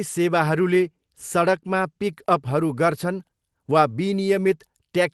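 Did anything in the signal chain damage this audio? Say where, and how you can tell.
No, nothing in the signal chain damaged this audio.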